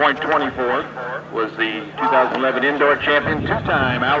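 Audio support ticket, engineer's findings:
No faults found; call path band-limited at 8 kHz.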